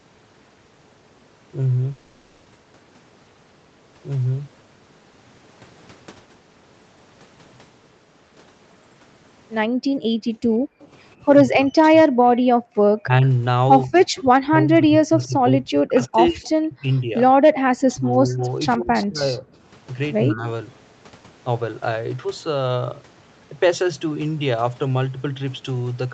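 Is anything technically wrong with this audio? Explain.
Yes, there are a few problems, all in the first 20 seconds or so.

From 1.91 to 2.47 s there's a gap of about half a second that gets filled with a buzzy, smeared continuation of the last sound before the audio picks up again, with that stretch simply gone. That's most likely a long network dropout: packets stopped arriving and the receiver papered over the hole instead of going silent.

At 9.68 to 10.80 s, and again briefly at 12.70 to 12.75 s, the background sound ducks out. That's the background being gated by the echo canceller, which clamped the mic while the loudspeaker played. The first dip goes down about 40 dB for roughly half a second in total, the second about 29 dB.

At 10.80 to 10.87, 14.16 to 14.23, 16.44 to 16.48 and 17.94 to 19.06 s, there's a faint trailing copy of the audio about 137 ms late. It ranges from about 35 dB to about 20 dB under the main signal. 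That's likely an echo leak: the far end's canceller didn't fully remove its loudspeaker pickup and sent it back.

Between 11.44 and 20.47 s, the talker's speech keeps dipping and cutting in and out, at worst by roughly 30 dB, for around 4 seconds in total across that span. That's likely speech suppressed in double talk: with both sides talking, the canceller couldn't separate the talker from the echo and turned everything down.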